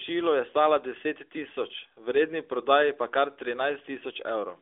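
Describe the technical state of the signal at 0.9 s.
At 0.9 s the audio is intact, with no fault to report at that moment.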